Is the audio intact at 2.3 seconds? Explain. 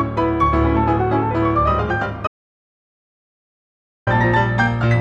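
No. At 2.3 seconds the clip is inside an audio dropout to silence that runs from about 2.27 to 4.07 s, so roughly 1.8 s of sound is missing. The sound breaks off abruptly mid-flow and returns just as abruptly, with dead digital silence between. The input was likely lost while recording continued, writing silence. Unlike a natural pause or a noise gate closing, no room tone or decay remains in the gap.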